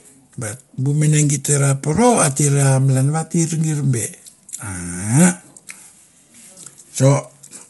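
From start to finish the speech sounds rough and grainy, with a hiss filling the gaps between harmonics and nothing above 11.6 kHz. That's likely low-delay AAC compression: short frames can't resolve pitch harmonics well, and the damage fits a low bitrate around 32 kbps.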